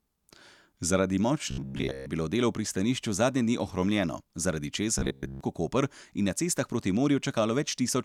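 Speech clip with robotic sound from repeated short buffers at 1.51–2.06 s and 4.99–5.41 s: most of the audio becomes a rigid 66.8 Hz buzz, likely a roughly 15 ms chunk looping while new audio arrives too late.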